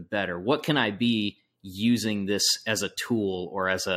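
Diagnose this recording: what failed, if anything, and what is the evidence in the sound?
Nothing failed: across the whole speech recording, no stage from capture to playback leaves an audible mark.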